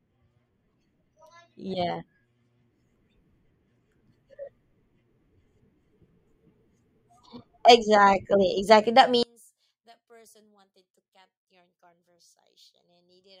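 From 9.23 s to the end at 13.4 s, the centred speech collapses by about 34 dB when the channels are summed, leaving only a faint residue. The likely cause is one channel inverted: with one side's polarity reversed, the identical mono content cancels itself. On a waveform the summed trace shrinks abruptly to a sliver; a spectrogram shows the whole band almost emptied above a dim remnant.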